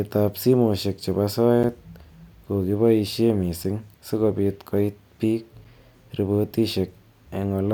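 Brief hard-edged dropouts of about 6.5 ms interrupt the speech at 1.63 s, after "ab simoshek chebo", at 3.64 s, just before "sikobit koit bik", and at 5.64 s, after "sikobit koit bik". This is a gap between chunks: the audio arrives in 2-second pieces, with silence inserted at each join, while nothing is lost.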